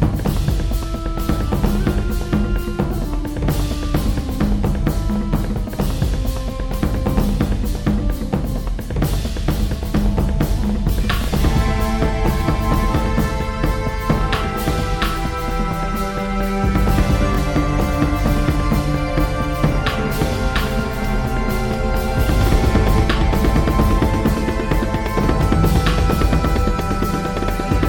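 Two brief stutters break the audio, at 11.24 to 11.28 s and 17.35 to 17.38 s, each a single jittery repeat of a slice of about 23 ms. These are Bluetooth stutter: the receiver replayed its last buffer while data was lost, which fits one missing packet each time.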